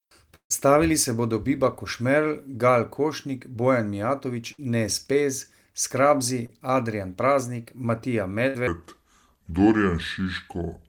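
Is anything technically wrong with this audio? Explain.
Yes. The speech has three bursts of packet loss, one short concealed packet loss, and a final section played at the wrong speed.

Bursts of packet loss happen at 0.35–0.51 s, 4.52–4.59 s and 8.48–8.55 s. Each time, a run of packets failed to arrive in time, and the receiver stretched the last sound and faded it down. The first gap loses about 150 ms and ends in roughly 100 ms of silence. The later gaps lose about 60 ms and 70 ms. Each is heard as a held buzz or fading hiss followed by a jump ahead. On a spectrogram, frozen horizontal bands fade out, and the first one drops to blank before the speech resumes.

A short concealed packet loss occurs at 6.46–6.50 s. About 20 ms of audio never reached the decoder, and roughly 27 ms of synthesized continuation filled the hole before blending back into the real signal. It sounds like a brief smear or wobble, and a short consonant may disappear. 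On the waveform it appears as a tiny stretch of overly regular cycles, and on the spectrogram as a short smudge where the harmonics stop evolving.

A section at the wrong speed runs from 8.67 s to the end. It plays at 0.726 times the original speed, so the speech is slower and about five semitones deeper, with timing and pitch dropping together. This most likely comes from a player or editor applying the wrong clock rate. On a spectrogram, harmonics and formants shift downward and syllables stretch out in time. On the waveform, the cycles widen.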